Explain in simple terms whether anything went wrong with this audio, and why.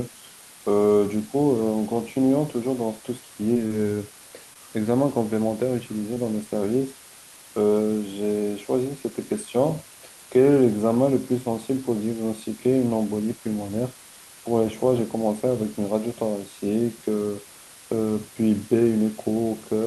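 A steady hiss runs under the whole recording. This is low bit depth with dither: the speech is stored with only about 6 bits, and a little noise was mixed in before rounding, so the coarse steps become a constant, fairly loud hiss rather than harsh distortion.

There are three moments of short concealed packet loss, at 3.53 s, from 3.67 to 3.84 s, and at 6.14 s. Each time about 20 ms of the call never arrived. The receiver papered over the gap by continuing the preceding sound, which is heard as a brief smear or wobble.

At 4.54 s there is a short stall from a late packet. A chunk of audio turned up about 20 ms late, so the receiver held the last sound a little longer and then carried on. Nothing is lost, but that sound is briefly drawn out, with a slight buzz or dip.

The call link itself, which passes sound up to about 12 kHz, adds its usual coding noise.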